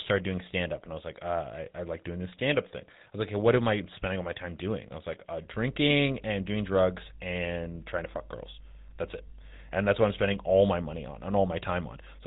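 A speech recording with a buzzy, gravelly roughness throughout and nothing audible above 3.8 kHz, so it sounds thin and boxed-in. This is GSM full-rate codec damage, and it is plainly audible. The codec rebuilds the voice from a vocal-tract model driven by a sparse, regularly spaced pulse train, which fits the 13 kbps GSM full-rate coder. From 5.54 s, just after "I was like uh", a steady low 50 Hz drone of mains hum enters and continues to the end, roughly 20 dB below the speech. It comes from power-line interference, such as a ground loop or a nearby transformer, leaking into the signal.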